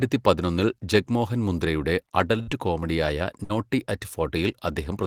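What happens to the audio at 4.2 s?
Nothing goes wrong at 4.2 s; the speech runs through that moment intact, with no dropout, click, distortion or other fault.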